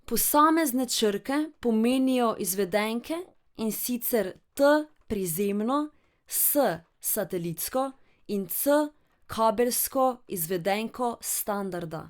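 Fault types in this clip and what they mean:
No technical faults can be heard in the recording; the signal stays continuous and steady throughout, with nothing interrupting or disturbing the audio.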